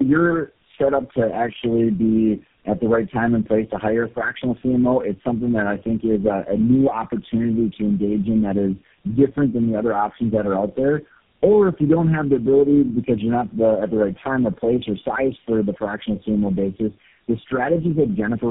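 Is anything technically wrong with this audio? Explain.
Yes. Tandem speech coding affects the whole clip. The speech has passed through four low-rate speech coders in a row, consistent with a chain of AMR-NB, G.729A, AMR-NB again and finally GSM full rate, joined by G.711 links. Each coder re-encodes the previous one's already degraded output, so the errors compound. The result is rough, muffled and warbly speech, well beyond what any single codec would produce, with nothing above about 3.7 kHz.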